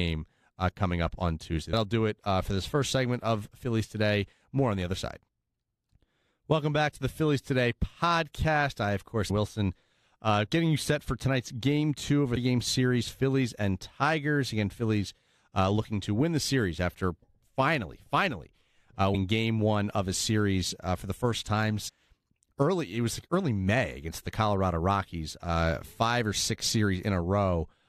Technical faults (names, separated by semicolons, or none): damaged data in a compressed stream